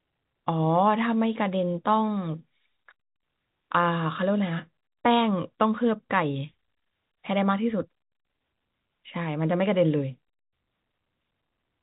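No technical faults can be heard in this speech recording, which carries the narrow band of ordinary telephone coding, with nothing above about 3.8 kHz.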